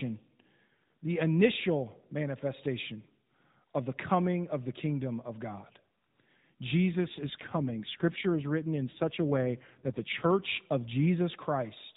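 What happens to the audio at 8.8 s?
At 8.8 s you're inside an AMR rate drop running from about 6.92 to 10.51 s. The network pushes the codec to fewer bits, and the roughness fits a fall from 12.2 to 5.9 kbps. The voice goes buzzier and more synthetic, with no gap and no change in bandwidth.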